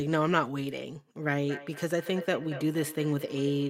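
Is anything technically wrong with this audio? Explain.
Yes. From 1.41 s to the end, there is feedback echo between two devices. A second device replays this microphone's sound, which returns roughly every fifth of a second at about -12 dB.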